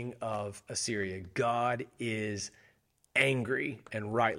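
A worn or dirty contact in the signal path makes and breaks rapidly from about 0.33 to 0.41 s, chopping the speech and adding pops from any DC on the line. The result is loose connector crackle, a brief irregular burst of scratchy crackling.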